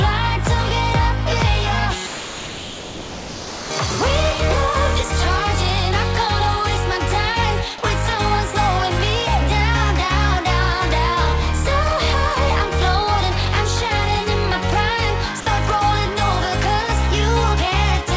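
From 2.07 to 3.71 s the sound gives way to steady, featureless noise for 1.64 s, and again briefly from 15.40 to 15.46 s for 60 ms. These are likely sound dropped by the voice detector, which treated the audio as background and stopped sending while the receiver filled in comfort noise.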